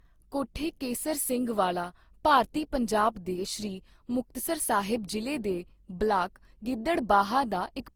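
From start to finish the speech carries generation loss, likely from repeated Opus encoding, about five passes at what sounds like 48 kbit/s, each on a shifted frame grid. It sounds swirly and hollow with blurred attacks; a spectrogram shows smeared upper bands and nothing above 20.4 kHz.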